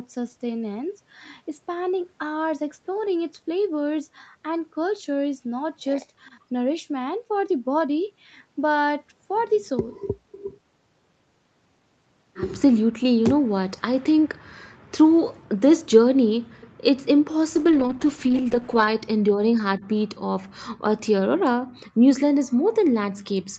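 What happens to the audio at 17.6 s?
A call bitrate drop runs from 17.56 to 18.95 s. The sound turns coarse and watery, which points to the encoder falling from about 40 to 10 kbps for roughly 1.3 s.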